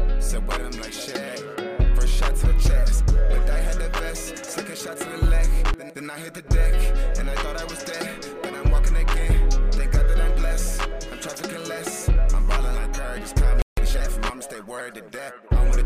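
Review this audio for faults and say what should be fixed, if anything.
A playback stall cuts the sound at 13.62 s. Silence lasts about 0.16 s, until 13.77 s. The player likely ran short of buffered data, or its output thread was blocked. A deeper playback buffer and a non-blocking audio thread would prevent it.

Time-compressed catch-up follows from 13.77 to 14.07 s. The player clears its backlog by dropping short slices and cross-fading the rest, so the audio runs at 1.5 times speed. Pitch stays normal. Avoiding the stall would remove this hurried stretch.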